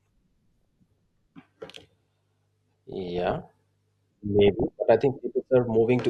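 DAB burbling appears three times, from 0.55 to 1.01 s, 2.92 to 3.48 s and 4.39 to 4.71 s. Weak reception let bit errors, on the order of half a percent, slip past error correction into the MP2 stream, corrupting samples, which put short blips of noise in single sub-bands, and scale factors, which make individual sub-bands leap in level for up to a frame. Over the speech this is heard as bursts of noise blips and level jumps in single sub-bands, densest in the middle burst.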